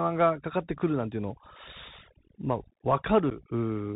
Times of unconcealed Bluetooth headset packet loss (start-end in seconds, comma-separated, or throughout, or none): 3.30-3.32